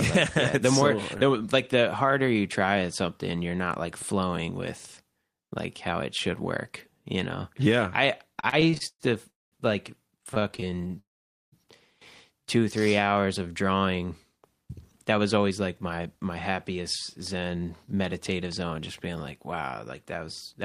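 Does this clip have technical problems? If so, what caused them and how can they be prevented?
Yes. Repeated stalls (stutter) at 8.35–9.02 s (nine gaps, longest 113 ms) and 10.08–10.99 s (22 gaps up to 22 ms). The jitter buffer kept running dry and the last sound was stretched to fill each gap. Unlike a freeze, these are many brief interruptions. Prevention: a larger adaptive jitter buffer and more stable network delivery.

Call audio freeze at 9.30–9.54 s (223 ms) and 10.99–11.54 s (531 ms). The sound holds, then falls to silence for about 200 ms and 490 ms before resuming, likely because packets were held up and the buffer emptied. It is one long gap, not a stutter. Prevention: prioritise call traffic with QoS on congested links.

Jitter buffer slow-down at 12.79–13.50 s. Repeated pitch periods add 111 ms, so the audio plays at 86% speed with unchanged pitch. Unlike stalls, it drags without any gaps. 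Prevention: avoid abrupt target-delay increases.

Jitter buffer speed-up at 15.11–16.79 s (107%), 17.21–19.60 s (108%) and 20.03–20.55 s (108%). Short pitch periods are trimmed out, removing roughly 150, 200 and 50 ms, so the audio sounds hurried while the pitch holds steady. Prevention: drain excess buffer delay more gradually.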